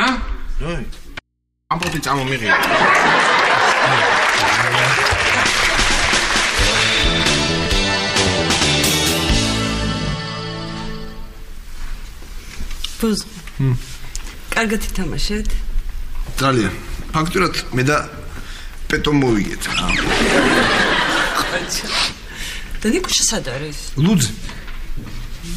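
An audio dropout to a faint residue cuts the sound abruptly from 1.19 to 1.71 s, leaving only hum roughly 55 dB down. The abrupt edges and the lingering hum, unlike a pause or fade, point to a likely break upstream while the input stayed live.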